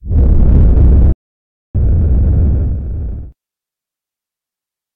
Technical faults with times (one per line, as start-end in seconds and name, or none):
1.12-1.75 playback stall